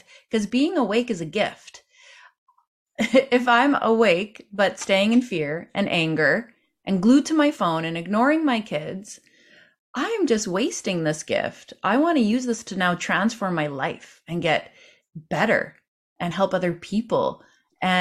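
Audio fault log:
Nothing stood out on listening to this speech recording.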